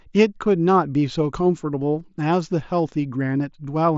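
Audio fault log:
1.99 s, concealed Bluetooth headset packet loss: a buzzy smear lasting about 15 ms, then a slight warble as real sound returns. Audio on the mSBC link was lost, consistent with two dropped packets, and the receiver patched the gap by repeating closely matching recent waveform.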